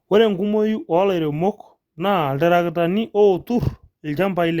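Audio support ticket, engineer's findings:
Clock slip clicks, 0.24–4.59 s: faint ticks about every 0.15 s. Likely unsynchronised clocks roughly 150 ppm apart, dropping or repeating one sample per slip.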